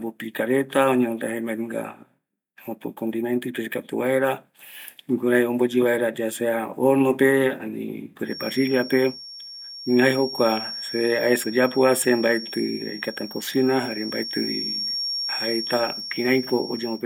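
A speech recording in which a feedback whistle enters at 8.23 s and continues to the end at 17.05 s. It is a thin, steady tone at 5.5 kHz, sitting roughly 10 dB below the speech and swelling and fading slowly in level without building up. The likely cause is a loudspeaker-to-microphone loop held just at the edge of instability, so that a single high frequency keeps recirculating and sustaining itself rather than running away into full howl.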